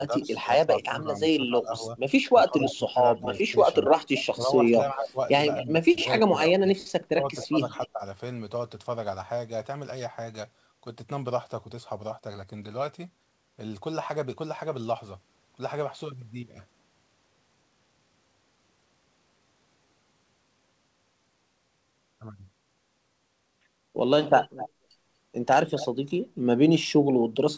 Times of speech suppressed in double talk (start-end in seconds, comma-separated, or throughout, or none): 0.06-8.02